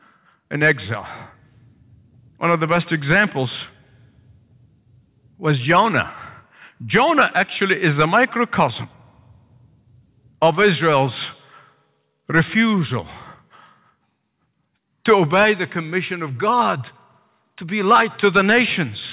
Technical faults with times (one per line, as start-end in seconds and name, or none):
none